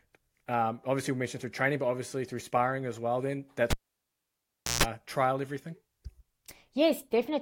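At 3.70 s the speech is cut by a sharp pop as the cable is pulled while live, and then almost nothing is heard for about 1.08 s. Just before the signal returns at 4.83 s there is a 144 ms burst of 60 Hz mains buzz, where only the plug tip touches. A second pop follows as the sound comes back. That buzz burst between the two pops is what separates a cable pulled and plugged in from a simple digital dropout.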